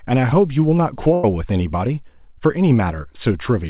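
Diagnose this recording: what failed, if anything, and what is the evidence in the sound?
The network dropped a burst of packets around 1.14 s. For roughly 0.1 s, until 1.24 s, the speech doesn't cut to silence. It carries on as a held, fading smear of whatever came just before, and then it picks up further along with about 100 ms gone. That's the receiver's loss concealment stretching the last good audio and turning it down. The audio has nothing above 4 kHz, which points to a G.711-style telephone-band call path.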